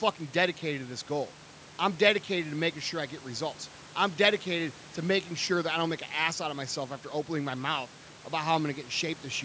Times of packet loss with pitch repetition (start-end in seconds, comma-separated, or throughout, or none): none